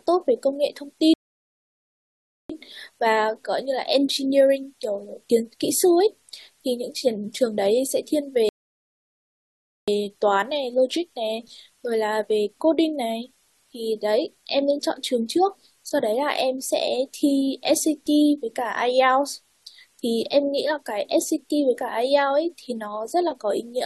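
Speech carries a constant, even hiss from low bit depth with dither, roughly 40 dB below the voice and consistent with 10-bit quantisation, visible as a flat noise floor across the whole spectrogram. Two rebuffering stalls, from 1.14 to 2.50 s and 8.49 to 9.88 s, each insert about 1.4 s of silence before the speech resumes exactly where it stopped, showing as flat gaps in the waveform.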